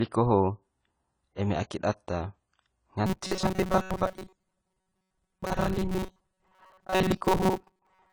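Across the whole speech clip there is AAC compression damage, likely from a low-bitrate AAC-LC encode, with the dullness pointing to roughly 24 kbps. Sibilants sound smeared and fizzy. It is a steady, even coarseness, unlike packet loss, which comes in bursts.

From 3.06 s to 8.13 s the speech turns into a robotic sound from repeated short buffers, likely because new audio arrived too rarely and the software looped the last fragment instead. The buzz sits at a fixed 188 Hz, which fits a buffer of about 5.3 ms. Most of the sound in this stretch is repetition. Unlike codec warble, the buzz is fixed and metallic.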